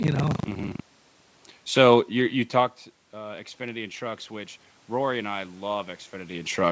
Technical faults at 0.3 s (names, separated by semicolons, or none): buffer tearing